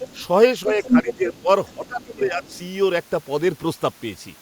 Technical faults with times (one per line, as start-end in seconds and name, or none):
0.00-0.25 other side's voice leaking through
0.80-2.50 speech suppressed in double talk
0.83-1.14 other side's voice leaking through
1.67-2.14 other side's voice leaking through
2.44-2.58 other side's voice leaking through